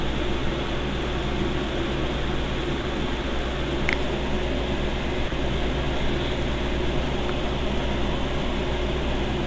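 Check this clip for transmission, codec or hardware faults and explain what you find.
One fault turns up, three brief dropouts in the sound, likely from the sender's voice detector. At 2.82–2.84 s, 3.22–3.24 s and 5.28–5.32 s, the detector apparently judged the signal as background and stopped sending, so the receiver filled in comfort noise. Each time, 20 ms, 20 ms and then 40 ms of sound give way to steady noise or near silence before the signal returns. Through the call's G.722 path, nothing above 8 kHz comes through.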